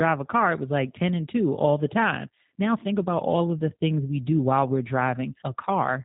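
From start to finish the speech sounds narrow and muffled at the top, with a faintly rough, buzzy, synthetic edge on every voiced stretch, and consonants lose their crispness. That is plainly audible G.729 codec damage: the voice is being rebuilt from a vocal-tract filter, a pitch predictor and a sparse set of pulses rather than sent as a waveform. Nothing above 4 kHz survives, and the coarseness fits the codec's 8 kbit/s rate.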